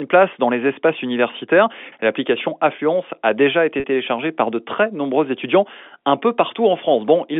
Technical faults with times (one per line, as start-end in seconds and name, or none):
3.80-3.84 packet loss with pitch repetition